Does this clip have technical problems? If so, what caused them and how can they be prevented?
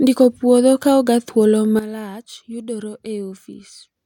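Yes. A sudden gain jump occurs at 1.79 s: the speech and its background noise drop together by about 12 dB in a single step and stay at that lower level until the end of the clip. Because the level falls from one sample to the next with no fade, the cause is likely a digital gain setting or bit shift applied instantly rather than ramped. Prevention: apply any gain change as a short ramp over several milliseconds instead of switching it between adjacent samples.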